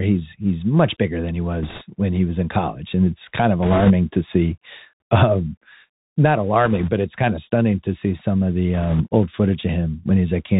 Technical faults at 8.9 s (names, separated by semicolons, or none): Bluetooth CVSD headset codec; bit errors on a Bluetooth voice link